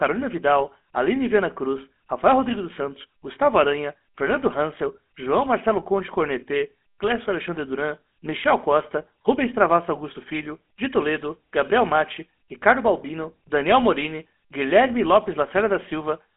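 Throughout, the speech carries plainly audible GSM full-rate codec damage: a buzzy, gravelly roughness from pulse-driven vocal-tract modelling, in a 200 Hz to 3.5 kHz telephone band, with nothing above 3.8 kHz.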